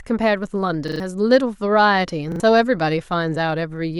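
At 0.88 s and again at 2.32 s, a repeated buffer: one piece, fitting a 40 ms buffer, replays with hard joins, a stutter rather than a dropout's silence.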